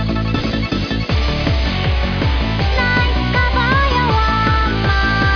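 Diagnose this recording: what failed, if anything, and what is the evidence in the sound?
Nothing failed; no faults found.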